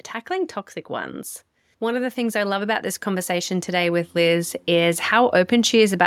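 An automatic gain rising fault affects this speech recording: from 1.79 s to 6.02 s the gain control, judging the input too quiet, steadily pushes its gain up by about 9 dB, so the voice and the background noise swell together across those four seconds.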